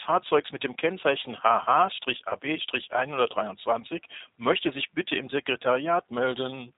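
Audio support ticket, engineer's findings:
Speech path encoded with G.729 codec at 8 kbit/s. Band cut at 4 kHz, pulse-built excitation leaves audio thin, rough and plainly synthetic throughout.

VoIP packet loss concealed by the speech codec, 2.29 to 2.35 s. Fits a single lost 20 ms packet. Decoder extrapolates the last frame into a fading smear, with recovery lagging briefly afterward.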